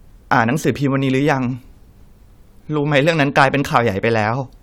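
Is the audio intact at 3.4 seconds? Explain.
No. Hard clipping runs from 3.38 to 3.78 s: the speech is driven about 5 dB past what the stage can pass, so peaks are sliced flat, giving crackle on the peaks. The waveform shows squared-off tops; a spectrogram shows harmonics smeared far upward.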